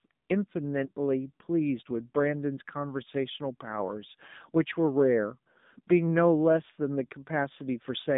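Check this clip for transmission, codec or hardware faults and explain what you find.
Two faults are present: the speech has passed through an AMR narrowband mobile codec, and one speech frame was lost early on.

AMR narrowband mobile codec, throughout: the signal was carried at 8 kHz sampling and rebuilt from a vocal-tract model excited by a few pulses per subframe. The line passes roughly 150 Hz to 3.7 kHz, so the speech sounds thin and muffled with no top end. The codec damage is plainly audible as a buzzy, synthetic edge, which fits a low mode around 7.4 kbps.

Lost AMR speech frames, from 0.86 to 0.92 s: a single 20 ms frame failed its checksum, and the decoder filled the gap by reusing the previous frame's pitch and vocal-tract settings at reduced gain. Because only one frame is missing, there is no fade to silence. Instead there is a brief dip or warble, and the speech comes back weak or rough for a moment before it settles.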